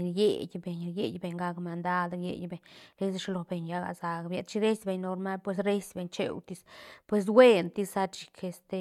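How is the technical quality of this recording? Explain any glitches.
No glitches can be heard anywhere in this speech recording. There is nothing in it that calls for a technical explanation.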